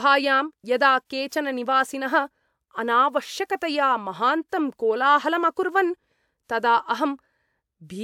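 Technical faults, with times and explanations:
No technical faults are present.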